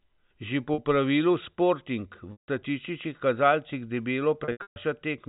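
Speech over a telephone-band G.711 link, with packet loss with pitch repetition at 0.74 s (a 40 ms held buzz), 2.32–2.48 s (160 ms) and 4.44–4.76 s (scattered, longest run 140 ms). The lost audio is bridged by repeating the last pitch period. On a waveform this shows as identical cycles that taper to silence, and on a spectrogram as frozen harmonic stripes that fade out.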